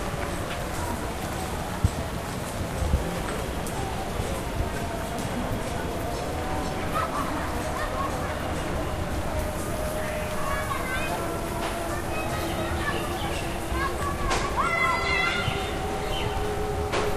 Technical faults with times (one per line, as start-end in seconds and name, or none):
0.06-3.41 train of clicks